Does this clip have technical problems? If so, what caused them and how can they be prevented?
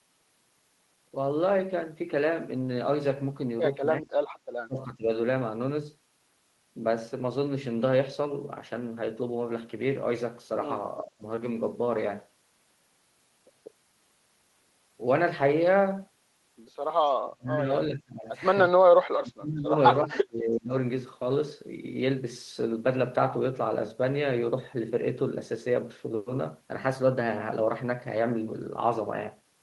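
Yes. The speech ducks sharply at 4.0–4.06, 4.67–5.08, 11.03–11.23, 17.14–17.69, 17.88–18.29, 19.13–19.73 and 20.06–20.73 s, dropping by roughly 15 to 30 dB. That's likely speech suppressed in double talk: with both ends talking, the echo canceller couldn't separate this talker from loudspeaker echo, so it turned both down. A headset, or better double-talk detection in the canceller, would prevent it.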